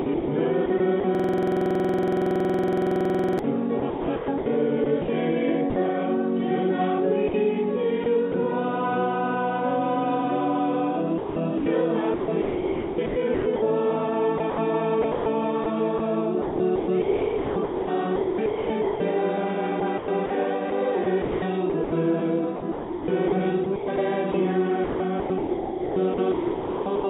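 From 0.02 to 5.76 s the sound drops out repeatedly, with about 1.8 s in total replaced by a flat, hissy fill. This is sound chopped by the voice detector, likely a sender gate switching off and inserting comfort noise. On a waveform the gaps show as low, even noise floors between real segments. On a spectrogram they appear as smooth, featureless bands that stop at 4 kHz, like the rest of the band-limited call audio.

Inside that stretch, from 1.15 to 3.39 s, a system hang loop repeats one 46.44 ms fragment 48 times. That produces a buzzing stutter at 21.5 Hz, which fits a 2048-sample ring buffer being replayed while the system froze. The waveform shows identical copies of the same fragment, and the spectrogram shows vertical stripes at a regular spacing.

The same chopping returns in three more stretches. From 7.28 to 8.34 s only about 0.1 s is replaced. From 11.18 to 19.0 s about 3.3 s is replaced, and from 19.8 to 27.04 s about 2.7 s.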